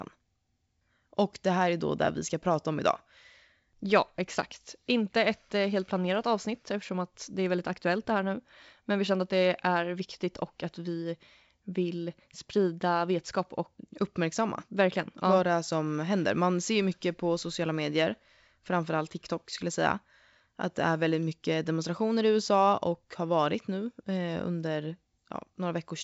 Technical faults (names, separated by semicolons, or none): none